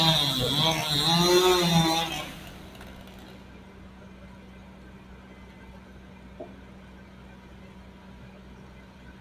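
A recording of sounds, run the whole way through a noise suppressor built for speech that was left switched on. It's mistaking the steady parts of the sound and the room ambience for background noise and ducking them, so the level keeps swinging by something like 10 dB. That's why it pumps and thins out from start to finish instead of sitting at a natural, even level.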